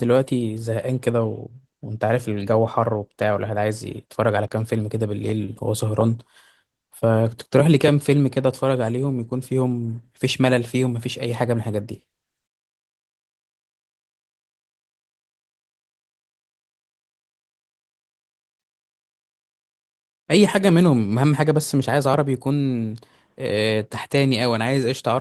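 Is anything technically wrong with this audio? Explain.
No, nothing is technically wrong: the speech carries only the light coding texture of Opus voice compression running in its normal full-band hybrid mode, consistent with a moderate rate of around 24 kbps.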